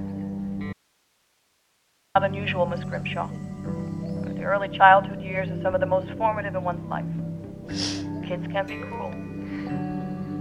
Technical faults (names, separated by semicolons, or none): audio dropout to a faint residue